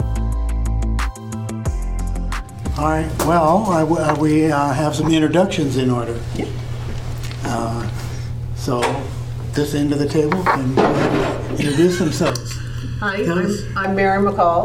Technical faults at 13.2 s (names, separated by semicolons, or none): channel delay (comb filtering)